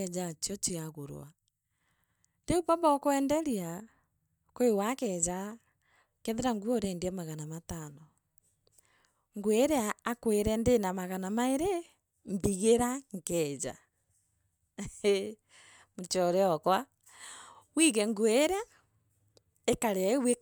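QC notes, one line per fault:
No audible faults found.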